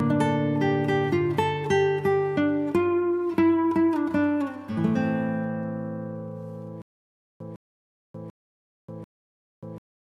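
From 6.82 s to the end, the audio falls into a stutter with silent gaps: one 156 ms fragment replays four times, each followed by about 585 ms of digital silence, likely a stalled stream retrying. Unlike a plain dropout, the same burst returns at an even 741 ms pace.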